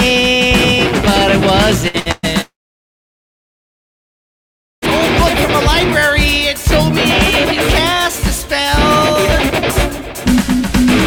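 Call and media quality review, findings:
Burst of packet loss, 1.88–1.97 s, 2.00–2.08 s and 2.11–2.26 s. Receiver concealment stretches the last sound into a fading buzz or hiss, 60 ms, 60 ms, then 120 ms. Playback resumes further on each time, with that stretch of sound skipped.

Long network dropout, 2.41–4.85 s. Brief fading continuation of the last sound, then about 2.3 s of silence; roughly 2.4 s of sound never returns. Likely a stalled network path delivering no packets, and playback resumes past the gap.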